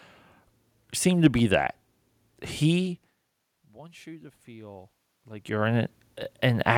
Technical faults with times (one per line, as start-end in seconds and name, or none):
3.49-6.73 automatic gain rising